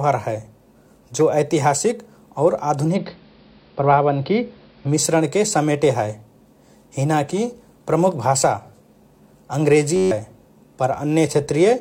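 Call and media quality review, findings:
Digital radio blending to analogue, 2.86 to 4.98 s, ending just before "समेटे हए". The hybrid receiver lost its digital stream and cross-faded over 113 ms to the AM simulcast of the same station. Hiss sits roughly 40 dB below the speech, and the level shifts by about 2 dB. The return blend at 4.98 s restores full bandwidth.

System hang loop, 9.96 to 10.11 s. The host or driver stalled while the audio hardware kept replaying its ring buffer. A single 10.67 ms segment repeats 14 times, heard as a 93.8 Hz buzz in place of speech. The segment length fits a 512-sample buffer. Roughly 150 ms of audio is lost.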